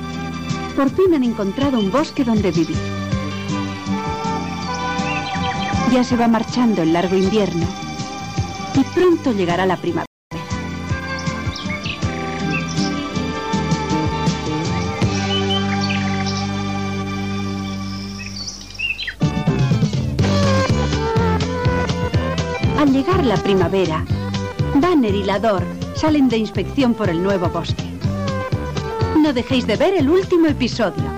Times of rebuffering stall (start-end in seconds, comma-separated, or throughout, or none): 10.06-10.31